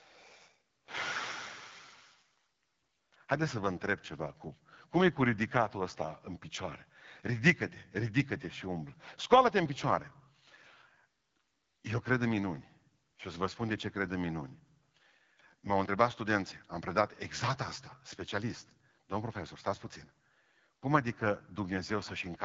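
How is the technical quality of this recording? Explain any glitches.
The recording is marred throughout by AMR wideband (HD Voice) codec damage, plainly audible across the whole speech clip. The codec rebuilds the voice from a pulse-driven vocal tract model up to 6.4 kHz and pads the band above with shaped noise, so nothing exists above about 7.5 kHz. The speech sounds rough and raspy, which points to one of the two lowest AMR-WB rates, fitting about 8.85 kbit/s. Unlike narrowband telephone coding, the band stays wide, with a noise-filled top.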